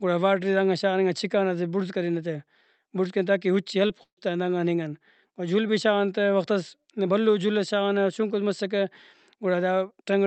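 Short concealed packet loss at 3.87 to 3.91 s, just after "بڑز کرینہ تاکہ اُچے": about 20 ms of the stream arrived too late, so the decoder extended the preceding sound, leaving a brief smear.

Burst of packet loss at 4.03 to 4.19 s, ending at "آن دانگان": roughly 140 ms went missing. Concealment stretched the last sound and faded it down before about 90 ms of silence, and the speech resumes with that stretch gone.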